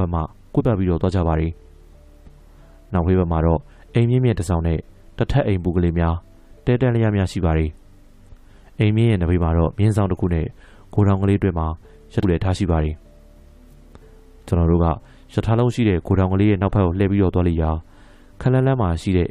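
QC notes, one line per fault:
0.59–0.62 s: damaged data in a compressed stream. A brief glitch. Corrupt bytes garble a frame, so the decoder misreads it and loses sync.
12.23 s: damaged data in a compressed stream again. A shorter glitch. The decoder hunts for the next valid frame header and then recovers.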